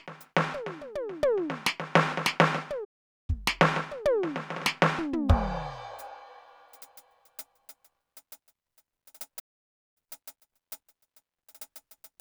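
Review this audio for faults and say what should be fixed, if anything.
Two playback stalls cut the music to silence, from 2.84 to 3.30 s (440 ms) and from 9.39 to 9.97 s (561 ms), before it resumes. The player likely starved of data or had its output thread blocked. Deeper buffering and a higher-priority audio thread would prevent this.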